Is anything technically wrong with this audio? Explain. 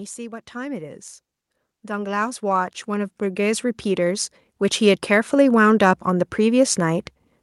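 Yes. From 1.81 s to 7.04 s there is automatic gain rising: the gain control judged the input too quiet and steadily raised its gain by about 14 dB. Speech and background noise swell together, so the noise floor climbs alongside the voice.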